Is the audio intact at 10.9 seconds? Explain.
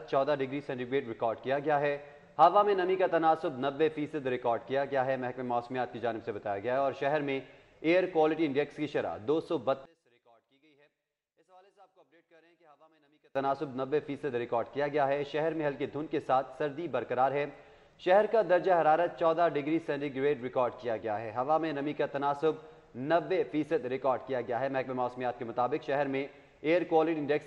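No. At 10.9 seconds you're in the middle of a stretch from about 9.86 to 13.36 s where the sound suddenly drops by about 33 dB and turns faint. That's most likely one channel inverted: one side of the stereo pair has its polarity flipped, so when the two are summed to mono, everything shared between them cancels out. All that's left is the small difference between the channels, a faint ghost of the sound.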